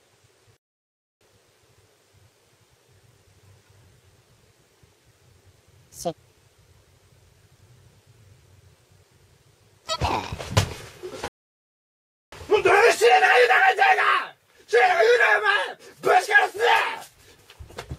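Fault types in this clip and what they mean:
Playback stall: the output goes silent in mid-flow and then resumes, which points to the player likely running short of data or having its output thread blocked until it caught up. The first gap runs from 0.57 to 1.21 s, about 0.64 s of silence. The second, longer one runs from 11.28 to 12.32 s, roughly 1.04 s. In both cases the sound cuts off abruptly rather than fading, and then continues.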